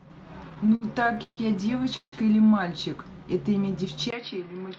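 From 0.49 to 1.39 s the speech drags and catches: ten brief hitches where a sound is held and smeared onward before it resumes, the longest lasting 143 ms. Together they add about 318 ms and fill roughly a third of that stretch, yet nothing is skipped. These are repeated stalls (stutter). Packets kept arriving late, the jitter buffer repeatedly ran dry, and the receiver extended the last sound each time until data caught up.

At 1.96 s the audio hangs for about 161 ms, ending at 2.14 s. The held sound gives way to roughly 90 ms of silence before the speech carries on from exactly where it stopped, with nothing lost but everything after shifted later. This is a call audio freeze, likely caused by packets being held up in transit long enough for the buffer to empty, so the receiver concealed the wait and then faded to silence.

At 4.10 s there is a 20 ms silence. After it the sound turns duller and boxier to the end, with a narrower band than the call audio had earlier. 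The level drops by around 10 dB, and a new background noise sits far below the speech. This is an input switched to a poorer device, likely a change to a narrower-band microphone or a headset's call profile partway through the recording.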